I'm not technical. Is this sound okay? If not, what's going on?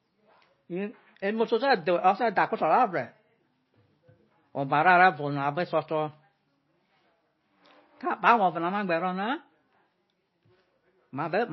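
No. The whole speech clip has plainly audible MP3 compression damage, likely from saving it as a very small file. Everything above 5.8 kHz is cut away, so it sounds dull. Quiet detail flickers in and out, giving a watery, swirly edge and metallic s sounds.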